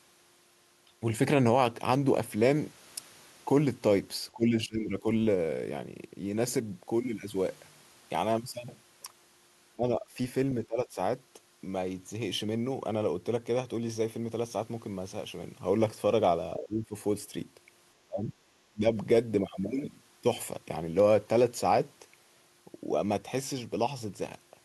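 The speech dips sharply at 4.34–5.05, 9.76–10.05, 10.67–10.97, 16.57–16.95, 18.05–18.33 and 18.73–18.93 s. Most drops reach about 15 dB, the last two about 25 dB. This is likely speech suppressed in double talk, with the echo canceller mistaking overlapping talk for echo.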